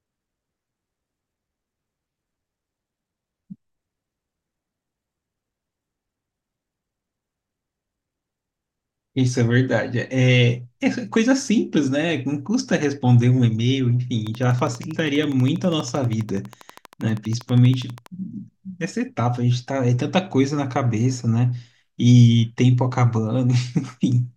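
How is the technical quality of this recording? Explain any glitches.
The recording has one glitch: a train of clicks from 14.27 to 18.07 s. About fifty near-identical pulses arrive at a regular 12.4 per second, peaking around 5 dB above the speech, and heard as steady ticking over the talking and the gaps, likely from electrical interference or a faulty connection or power supply.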